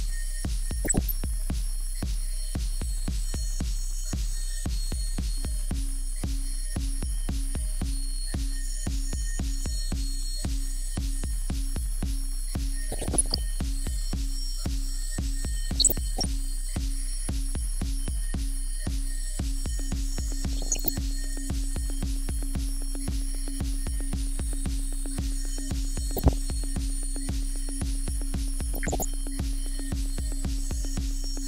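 DAB burbling is heard over the sound at 0.85–1.11, 12.90–13.38, 15.76–16.26, 20.53–20.89, 26.17–26.33 and 28.74–29.05 s. Weak reception let bit errors corrupt the coded audio, so single sub-bands get short blips of noise, showing as brief, blocky horizontal spectrogram patches.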